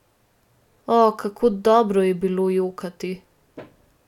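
Nothing here calls for attention, since the speech comes through without any audible technical fault anywhere in the recording.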